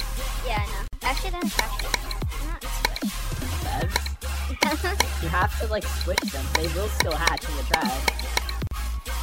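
Sound drops out abruptly from 0.88 to 0.93 s and again from 8.67 to 8.71 s, with gaps of 50 and 40 ms and smeared edges before it resumes. Each is a gap at a join of encoded pieces: separately encoded pieces were joined untrimmed, leaving encoder delay and end padding.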